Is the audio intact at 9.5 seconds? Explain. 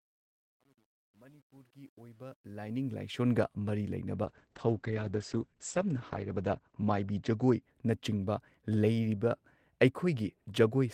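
Yes, the speech at 9.5 seconds is intact, with no fault at that moment.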